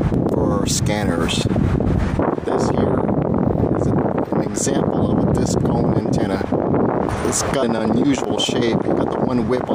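At 0.30, 3.90 and 7.62 s, compressed frames are skipped: around seven frames, each about 23 ms long, never reach playback, so the sound jumps ahead by roughly 150 ms each time.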